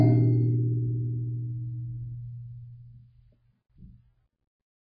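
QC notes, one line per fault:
Throughout, MP3 compression: music sounds dull and watery, nothing above 5.2 kHz, heavy swirling; likely a very low bitrate encode, around 16 kbps.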